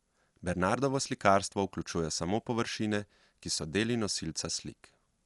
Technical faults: Dolby Digital compression

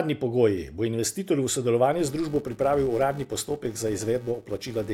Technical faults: filter restarted on every block

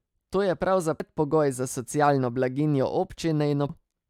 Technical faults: damaged data in a compressed stream

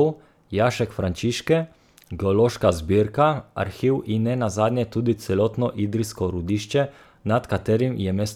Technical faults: none

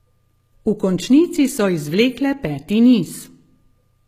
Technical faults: HE-AAC compression

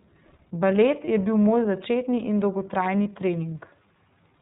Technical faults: iLBC codec; lost iLBC frames

